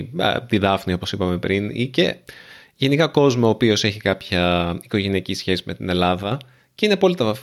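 Sudden gain jump from 6.23 to 6.32 s, after "οικογενειακή σχέση με την": speech and background noise drop together by about 6 dB, likely an unramped digital gain change.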